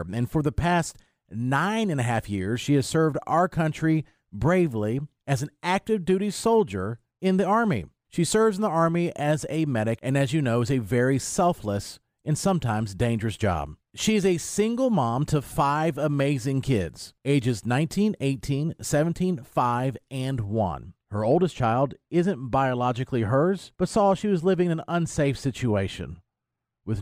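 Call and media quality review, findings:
De-emphasis applied wrongly from 20.45 s to end (27.01 s): treble-cut filter engaged on a path without matching pre-emphasis. Smooth downward slope, about 8 dB lower at 10 kHz than 1 kHz. Speech turns dull, muffled.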